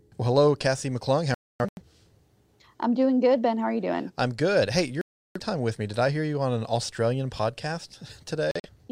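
At 1.34 to 1.83 s the speech breaks into short silent holes, the longest 256 ms. This is a digital broadcast dropout. Frames were lost, and the receiver muted until good ones returned. A second dropout mutes 5.01 to 5.40 s, just before "time with me". Brief gaps follow at 8.51 to 8.70 s.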